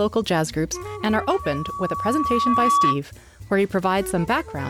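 At 0.76 s a loudspeaker feedback squeal starts creeping in: a single tone at 1.1 kHz that swells over roughly two seconds until it sits around 5 dB above the rest of the sound. What's happening is the mic is hearing the speaker it's feeding, and at that one frequency the loop gain has tipped past one, so the tone keeps feeding itself. It hangs on as a steady howl until it cuts out at 3.00 s.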